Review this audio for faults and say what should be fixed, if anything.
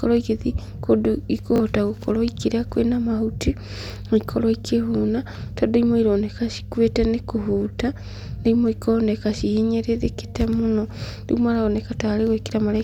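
A repeated buffer occurs at 1.56 to 1.60 s, between "igĩthiĩ kũndũ" and "gũkorwo ikĩrĩa kwĩna mahuti". Fresh audio failed to reach the output in time, so the device replayed its last block twice more. The repeat length fits a 20 ms buffer. Each replay butts against the previous one with a hard edge, so the speech catches in a quick stutter, close to a brief buzz, and around 40 ms of real speech is lost. To prevent it, enlarge the output buffer or give the audio thread higher scheduling priority so data arrives before each deadline.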